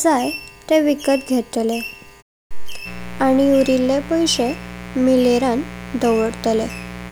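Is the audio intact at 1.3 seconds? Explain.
Yes, the speech at 1.3 seconds plays through intact, with no fault at that moment.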